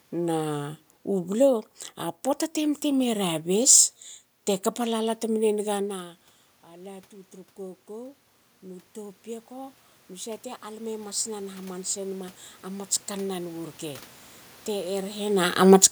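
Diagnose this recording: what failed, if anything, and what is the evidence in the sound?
Automatic gain rising, from 5.79 to 14.11 s, in the call processing stage. After the talker moves away around 5.5 s, the level drops by about 19 dB, and the gain control climbs about 13 dB over eight seconds, lifting the room noise along with the speech.

Automatic gain falling, from 15.57 to 15.87 s, also in call processing. The talker moves around 15.0 s, and the control pulls its gain down about 5 dB within a third of a second, so speech and background sink together.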